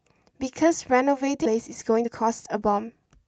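A skip ahead at 1.45 to 1.47 s drops around 0.7 s of speech. That stretch was lost in transit or discarded by an overflowing jitter buffer while later audio was already queued, so playback jumps forward and the two sides join almost directly, with no filler.

Jitter buffer speed-up follows from 1.55 to 3.22 s. The buffer was holding more audio than its target, so the receiver repeatedly cut short pitch-period pieces, removing roughly a fifth of a second. Speech runs at 113% of normal speed with unchanged pitch and sounds hurried. This is all heard through the Opus call path at 40 kbps, whose audio tops out at 8 kHz.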